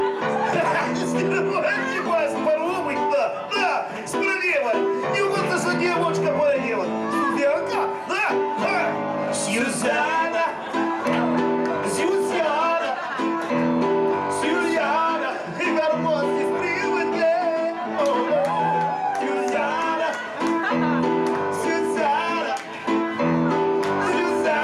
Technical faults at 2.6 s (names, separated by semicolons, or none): none